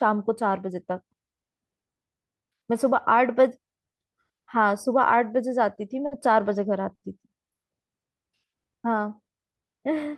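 Packets arrived late three times, draining the jitter buffer and causing a short stall from a late packet at 5.75–5.80 s, 6.06–6.14 s and 6.95–7.05 s. The receiver held the last sound for 20, 50 and 70 ms, then resumed without loss, so speech briefly freezes with a faint buzz or dip.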